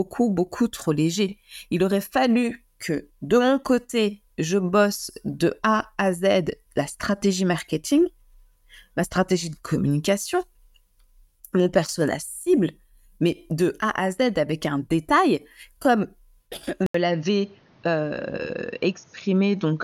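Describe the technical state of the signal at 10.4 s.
At 10.4 s the speech signal is intact, with no audible fault at that moment.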